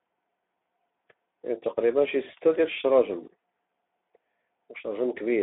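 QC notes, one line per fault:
throughout, Speex codec: the speech sounds hoarse and grainy, confined to a narrow 250 Hz to 3.6 kHz band with nothing above 3.7 kHz. The CELP coder has too few bits for the excitation, which fits a rate near 11 kbps.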